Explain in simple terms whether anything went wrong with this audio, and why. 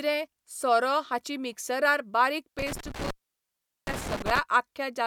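Intermittent contact between 2.59 and 4.39 s: a loose cable or plug briefly lost its connection, so the speech drops out for about 0.77 s, with crackle where the contact breaks and reconnects and faint hiss while the line is open.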